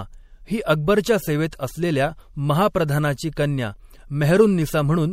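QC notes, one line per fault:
throughout: MP3 compression. Watery, swirly speech with dulled treble and smeared attacks, likely from an MP3 encoder starved of bits, fitting roughly 64 kbps.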